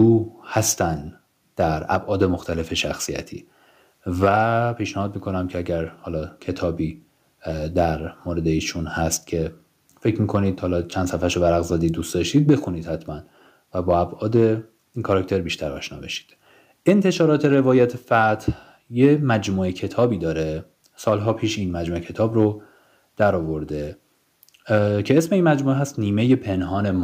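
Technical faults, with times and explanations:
No technical faults can be heard anywhere in the speech recording, and the signal stays steady and intact from its first moment to its last.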